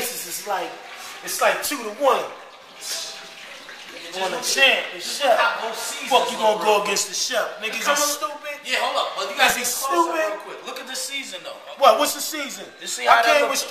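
No technical faults can be heard anywhere in the signal.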